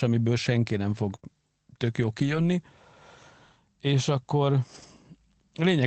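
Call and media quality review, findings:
Lost packet rebuilt from error correction: at 1.11–1.13 s, right after "amiből senki nem", and 4.74–4.84 s. Opus in-band FEC substituted low-bitrate copies, so there is no gap but the audio turns briefly rough and noisy. The 20 ms and 60 ms spans fit one and three lost packets.

Short concealed packet loss: back-to-back at 1.15–1.20 s and 1.20–1.24 s, just before "tök jó". Two packets missed the decoder, which extrapolated the preceding sound and crossfaded back. The result is a brief smear or wobble, with a possibly swallowed consonant. The Opus path's 8 kHz band limit applies throughout.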